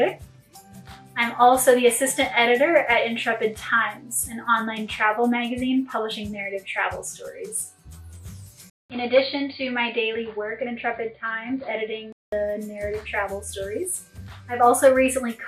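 Weak DAB reception let bit errors slip past error correction into the MP2 data from 7.16 to 7.28 s, at a rate of a small fraction of a percent, producing DAB burbling. Corrupted samples put short blips of noise into single sub-bands and corrupted scale factors make sub-bands jump in level, giving a brief burst of burbling over the audio. From 8.70 to 12.32 s the input likely switched to a poorer device. After a 200 ms silence the sound turns dull and boxy, with nothing above 4.8 kHz, a level drop of about 5 dB, and a faint new noise floor well below the signal.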